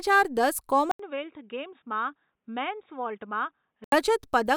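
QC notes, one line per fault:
0.91–3.92 s, input switched to a poorer device: there's a brief gap of about 80 ms, then the speech goes dull and boxy, with nothing above 3.8 kHz, drops to roughly 10 dB quieter, and picks up a new faint noise floor well below the speech. At 3.92 s the fuller sound comes back. The narrow band and change in tone point to a likely switch to another microphone or a headset's call profile and back.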